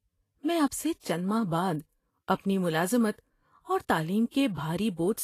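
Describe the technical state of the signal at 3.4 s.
At 3.4 s, as throughout the clip, the speech is hissy and grainy with smeared onsets, likely from Vorbis compression at a low bitrate near 32 kbps. Coarsely quantised treble turns into noise, and a spectrogram shows a hard ceiling at 14.2 kHz.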